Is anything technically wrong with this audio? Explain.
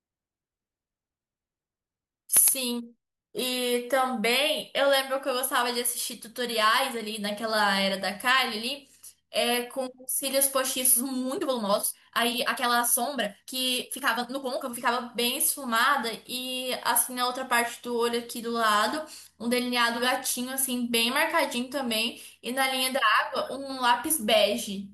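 Yes. From 11.30 to 14.90 s, a time-stretched section plays the speech at 1.65 times speed with unchanged pitch, likely from dropped short segments, sounding rushed.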